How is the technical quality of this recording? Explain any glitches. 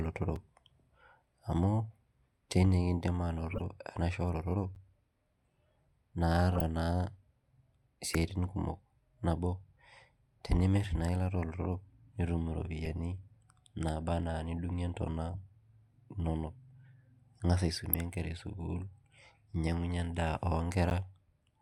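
The speech is marred by two kinds of fault: brief dropouts to silence and short bursts of garbled noise.

Three blocks of digital silence produce hard ticks. At 0.36 s a 4 ms hole gives a click, and at 4.75 s and 20.90 s, the latter just after "ninyangunyie endaa", 11 ms gaps sound like tiny pops. Each time, the output buffer likely went unfilled and was replaced by zeros, with no fade at either edge. The repeated 11 ms length fits a 512-sample buffer.

Six chirps and squeaks come from a corrupt frame decoded despite damaged bits. The longer bursts run 3.50–3.61 s, 6.54–6.61 s and 15.32–15.41 s, the last right after "naba na nidungie ntona". Brief blips land at 8.13 s, just before "kumok nabo", and at 12.85 s and 17.93 s. Flipped bits led the decoder to misread gains and codes, placing energy at wrong frequencies across a few consecutive frames.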